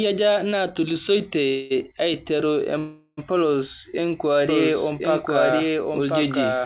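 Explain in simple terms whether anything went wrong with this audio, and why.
Call audio freeze, from 1.48 to 1.73 s and again from 2.78 to 3.20 s. Each time the sound stalls and the last moment is stretched into a fading buzz; the second one dies away to a brief silence. This likely happened because parts of the call arrived late and the receiver ran out of audio to play. Nothing is lost: the sound resumes where it stopped, so each stall just adds a pause.

Doubled audio track, from 4.49 s to the end. A second, equally loud copy of the sound plays about one second behind the first, so everything is heard twice, overlapping. It starts suddenly and sounds like a clean duplicate, not an echo from a room. The likely cause is the same audio being picked up twice, once through a slower route. Throughout, the sound has the muffled, phone-like quality of a call line that carries nothing above 4 kHz.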